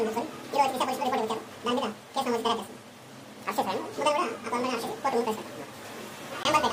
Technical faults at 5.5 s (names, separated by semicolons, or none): audio read two samples at a time (double speed)